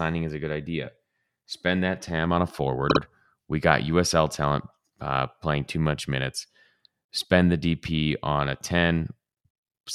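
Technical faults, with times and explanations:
2.89 to 2.99 s, repeated frames: a 52.2 ms block of speech plays twice more, causing a short stutter. The block length fits a pair of compressed frames, and the repeats add 104.5 ms.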